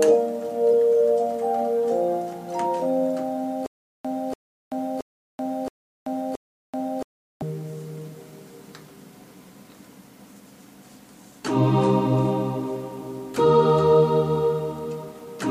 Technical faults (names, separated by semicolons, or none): stutter with silent gaps